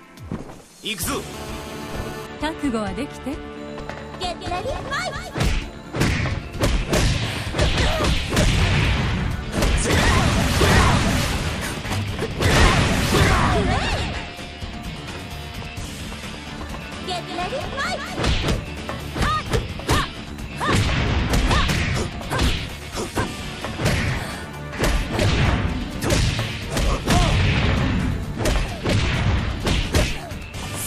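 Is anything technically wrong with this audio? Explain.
Yes. A GSM phone buzz runs from 1.34 to 2.27 s. A nearby 2G phone on a call pulses its transmitter about 217 times a second. The audio circuit rectifies those pulses. The result is a steady, hard, raspy 217 Hz buzz with many harmonics, about 15 dB below the signal.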